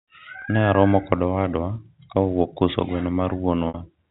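Speech over a G.711 telephone path, band-limited below 4 kHz, has two dropouts from packet loss with pitch repetition. At 0.42 to 0.44 s a 20 ms gap is bridged by a repeated pitch period, heard as a brief buzzy hold. At 3.68 to 3.74 s a 60 ms loss, which fits three lost 20 ms packets, stretches the repetition until it fades toward silence. The speech then returns through a short cross-fade.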